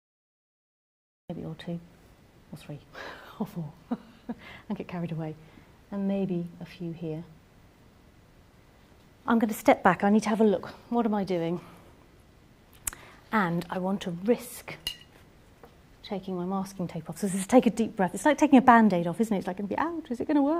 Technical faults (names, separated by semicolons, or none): cut-off start